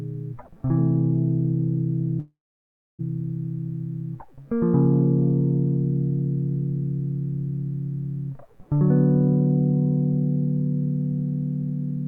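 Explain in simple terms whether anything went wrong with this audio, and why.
At 2.19 s the music smears into a brief fading buzz, then goes quiet for about 0.65 s, and returns at 3.01 s with roughly 0.8 s skipped. This is likely a long network dropout: audio stopped arriving, and the player covered the gap before giving up.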